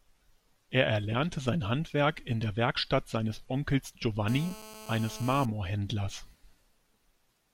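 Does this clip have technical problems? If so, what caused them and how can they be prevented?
Yes. From 4.28 to 5.46 s a hard, raspy buzz at about 217 Hz, rich in harmonics, sits about 16 dB below the speech. This is GSM phone buzz: a nearby 2G phone's call bursts are rectified by the audio circuitry. Keep phones away from recording equipment.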